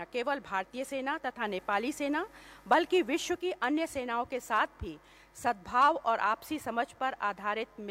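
From 1.32 to 3.48 s, digital radio blending to analogue FM: the receiver lost the digital stream and cross-faded over about 161 ms, bringing in hiss roughly 40 dB down and a level shift of about 4 dB.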